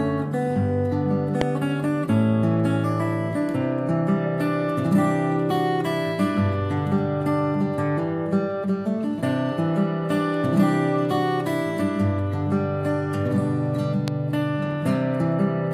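A sharp, isolated pop jumps out at 1.41 to 1.44 s, peaking around 20 dB above the surrounding sound, and a second, softer one, about 15 dB above it, hits at 14.08 to 14.10 s. Each is a single short click-thump, and the sound carries on beneath it. These loud pops are likely voltage transients, such as a switch, static discharge or driver glitch, added into the signal chain.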